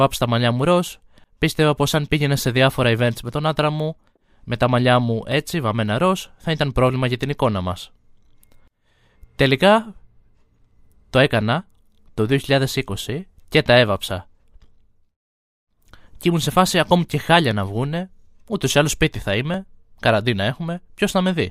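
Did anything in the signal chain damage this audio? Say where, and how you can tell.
Yes. Right after "τα μαλλιά μου ροζ", a regular click recurs roughly every 2.03 s from 1.25 s to 19.54 s, about ten in all. This is likely clock drift buffer slips: two clocks about 500 ppm apart, so the interface buffer drops or repeats about fifty samples per slip.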